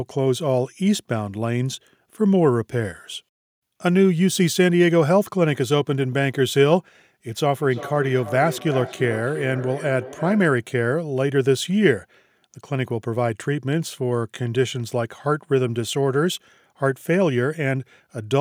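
From 7.28 to 10.68 s, feedback echo between two devices returns the speech roughly every third of a second, peaking about 14 dB down, with the spectrogram showing faint, evenly spaced copies.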